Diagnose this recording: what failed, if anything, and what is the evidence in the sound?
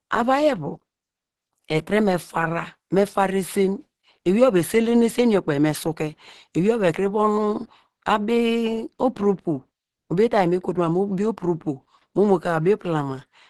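The codec stage failed. Across the whole recording the speech sounds muffled and hoarse, and nothing sounds above 12.1 kHz. The likely cause is Opus compression in its hybrid speech mode. The audible damage fits a low bitrate near 16 kbps.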